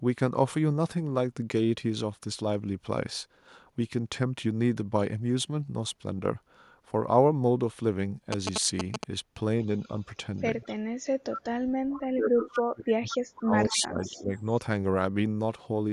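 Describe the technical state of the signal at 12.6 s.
At 12.6 s the speech sits inside a long stretch, from 11.55 to 14.31 s, where it dips and breaks up in pieces, at its worst falling by something like 40 dB. This is speech suppressed in double talk. With both sides talking at once, the echo canceller likely could not tell the near talker from loudspeaker echo and pulled everything down, so the voice thins and drops out while the far side speaks.

Right at that moment, from 12.55 to 12.6 s, a brief ghost of the voice slips through, arriving 217 ms late and roughly 10 dB below the direct speech. This is an echo leak, likely caused by one end playing the call over a loudspeaker whose echo canceller did not fully remove what its microphone picked up, so a short, delayed scrap of the sound was sent back.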